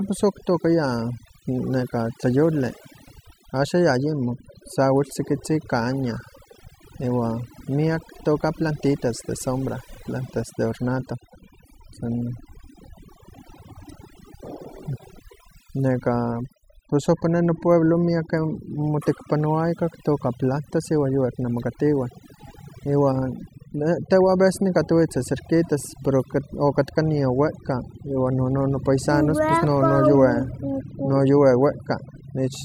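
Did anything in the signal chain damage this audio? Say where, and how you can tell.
Yes. The damage happens at the call processing stage, where a noise reduction tool was set far too aggressively, giving overdone noise removal across the whole clip. It pushes individual frequency bands down or off whenever they sit close to its noise estimate, and the softer parts of the speech fall below that threshold too. You can hear it in the gaps, which drop to near silence flecked with twinkling specks.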